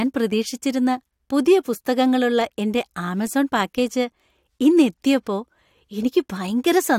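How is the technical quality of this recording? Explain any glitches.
The speech recording shows no glitches or technical faults anywhere in the signal.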